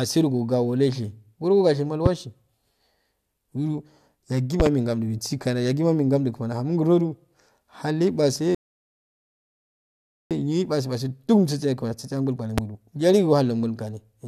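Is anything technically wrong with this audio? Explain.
Yes. The speech has two kinds of fault.

Loud pops occur at 2.06 to 2.09 s, 4.60 to 4.69 s (a double pop) and 12.58 to 12.60 s, each roughly 15 dB above the speech. A voltage step or pulse, likely from a switch, plug, static or driver glitch, rides on top of the signal. Unlike a dropout, the speech carries on beneath each sharp thump.

A rebuffering stall runs from 8.55 to 10.31 s. Playback ran out of buffered audio and halted, adding about 1.76 s of silence. It differs from a dropout because the speech resumes exactly where it stopped, so nothing is skipped and the clip simply runs longer.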